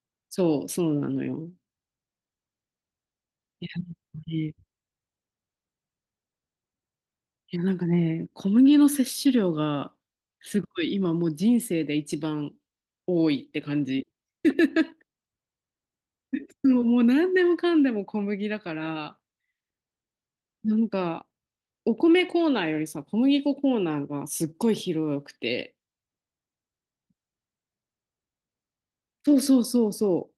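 No technical faults are audible.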